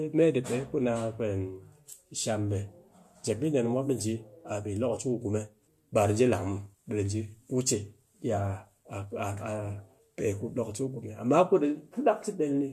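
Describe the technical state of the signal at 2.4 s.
At 2.4 s the speech signal is intact, with no fault audible at that moment.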